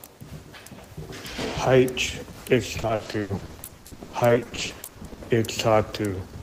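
From 2.81 to 5.19 s the audio turns choppy and robotic, the mark of repeated packet loss: dozens of dropouts, the longest 80 ms, each patched by extending the last sound, concealing about 39% of that stretch. Spectrograms show smeared, frozen bands with abrupt vertical edges; waveforms show chopped, repeating segments.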